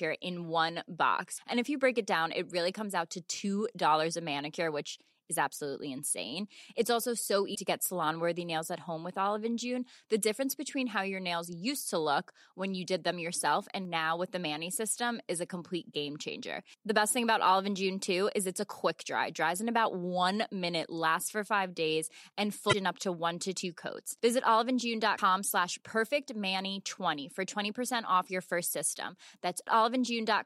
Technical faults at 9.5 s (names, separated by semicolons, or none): none